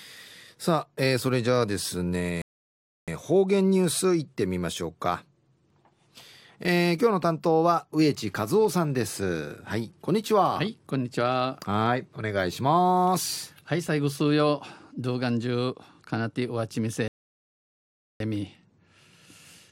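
Speech with two rebuffering stalls, at 2.42–3.08 s and 17.08–18.20 s, adding 0.66 s and 1.12 s of silence. Unlike a dropout, the speech resumes exactly where it paused, with nothing skipped.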